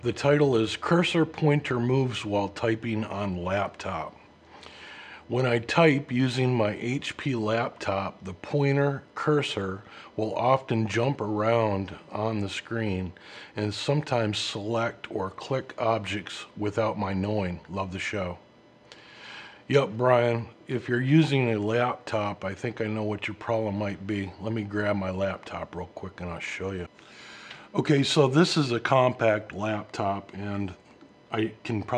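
No technical faults are audible.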